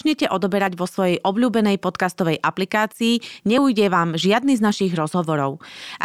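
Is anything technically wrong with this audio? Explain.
Yes. A dropped buffer (overrun) occurs at 0.67 s and again at 3.58 s in this speech clip. Each is heard as a jump where the sound skips forward with no gap of silence, losing roughly 10 ms the first time and about 20 ms the second. The likely cause is the recording software failing to read its samples before the hardware overwrote them, so those pieces vanished and the audio on either side was spliced together.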